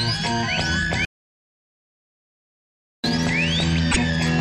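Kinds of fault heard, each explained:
hard clipping: The loudest peaks carry a crackly, brittle edge throughout the clip, because the signal is driven about 5 dB past what a stage could pass. Around 2 percent of samples are cut flat at the ceiling, adding harsh upper harmonics.
audio dropout to silence: At 1.05 s the sound stops dead and is replaced by silence, with no room tone, until 3.04 s. Nearly 2 seconds of audio is gone, likely because the input was lost while the recorder kept writing silence.
broken MP3 bit reservoir: From 3.91 to 3.98 s the sound jumps forward and a brief chirp, noise burst or short hole replaces it for about 70 ms. This is likely MP3 frames being removed, so following frames, about 26 ms each, decode borrowed bytes from the wrong frame.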